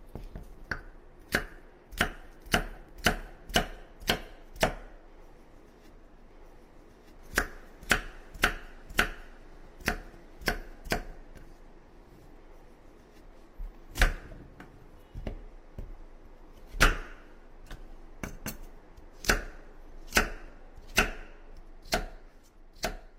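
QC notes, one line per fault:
No faults to note.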